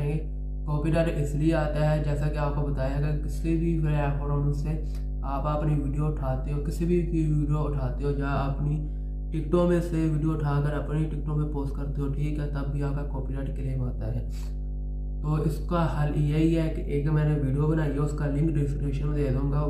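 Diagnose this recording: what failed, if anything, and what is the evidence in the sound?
The analogue wiring stage failed: a ground loop or a transformer close to the cabling has coupled the power line into the signal path, producing mains hum. For the whole length of the clip a steady low tone sits at 50 Hz, with some low harmonics stacked above it. It is loud, only slightly below the level of the wanted sound, so it never drops out of earshot.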